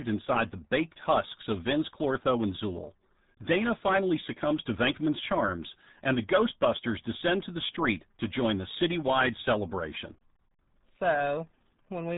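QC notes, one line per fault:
Throughout, RealAudio 14.4 codec: the speech is muffled and gargly, with nothing getting past about 3.8 kHz. That heavy smearing sounds like a codec starved of bits, which fits the 8 kbit/s dial-up rate RealAudio 1 was built for.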